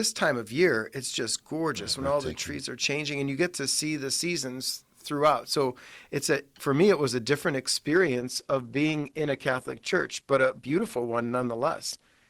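A speech clip in which an adaptive stream switches to a lower bitrate at 7.89 s and stays there to the end: the treble abruptly thins and codec artefacts rise, with no gap, which fits Opus stepping from 64 to 16 kbit/s. On a spectrogram the upper band cuts off sharply at that point.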